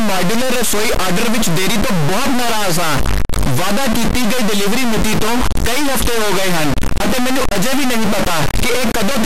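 Speech runs for the whole clip under two faults present throughout. A distortion rides on the signal and moves with the waveform, and the pauses between phrases are not silent but filled with a steady noise. That points to a stuck bit, likely a data line or converter bit held at a fixed value so that about half the samples are pushed off by the same amount. Clipping differs because it roughens only loud peaks and leaves pauses quiet. Here the quiet stretches are noisy too, which clipping cannot cause. Alongside this the sound is dull, with a gurgling, granular texture and upper frequencies that seem to switch in and out from moment to moment. That is plainly audible MP2 compression, likely at a low rate, consistent with around 80 kbps, where upper sub-bands are dropped and the rest coarsely quantised. A simple low-pass filter would give a steady dullness. The flickering highs and the watery grain mark a codec instead.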